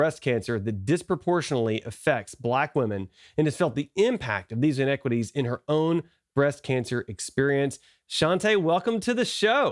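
No technical faults are audible in this recording.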